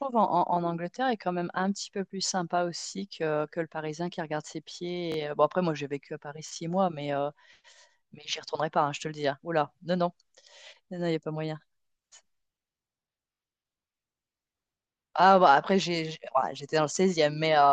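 Repeated buffer at 2.80, 5.12, 6.49 and 13.33 s: the playback device ran out of fresh audio and replayed its last block of about 21 ms, which fits a 1024-sample buffer. The block repeats once at 2.80 and 6.49 s, twice at 5.12 s and three times at 13.33 s, each time with a hard join, so the speech briefly stutters. The longest stutter is at 13.33 s. The audio then resumes where it stopped, with nothing skipped.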